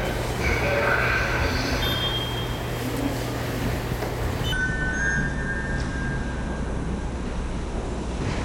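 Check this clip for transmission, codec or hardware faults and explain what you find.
One fault stands out. A section at the wrong speed runs from 4.53 s to the end of the clip. From that point the audio plays at half speed, most likely because the player or editor was clocking it at the wrong rate. Since speed and pitch are tied together, the sound suddenly drops roughly ten semitones and becomes slow and dragging.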